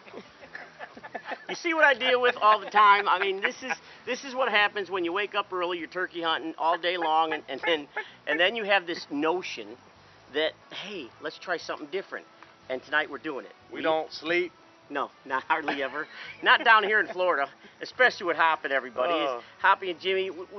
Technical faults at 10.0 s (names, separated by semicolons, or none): none